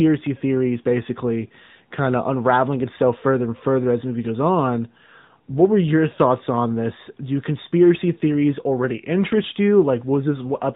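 Speech coded throughout with the AMR narrowband mobile codec: nothing above 4 kHz survives, and the plainly audible buzzy, synthetic edge fits a mode near 10 kbps.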